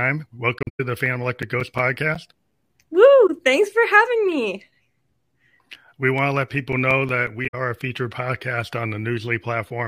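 AAC frame loss with muting comes first, from 0.59 to 0.80 s. Lost frames were zeroed by the decoder, and the overlapping windows fade the speech out and back in. About 171 ms of sound goes missing over a 213 ms stretch, which points to eight lost frames, with the longest run near a tenth of a second forming a soft-edged hole.

CD scratch ticks follow from 1.06 to 3.05 s. Twelve ticks arrive at roughly six per second, once per disc revolution, where a blemish destroyed more data than error correction could rebuild and the player concealed the bad samples. They are of uneven strength, the longest around 10 ms.

A single lost AAC frame mutes the sound briefly from 3.27 to 3.29 s, a short dip of about 21 ms.

CD scratch ticks return from 6.18 to 7.81 s. Ten ticks again come at roughly six per second, the longest around 5 ms.

Inside that run, AAC frame loss with muting recurs from 7.47 to 7.55 s. 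About 64 ms fades out and back in, consistent with three lost frames.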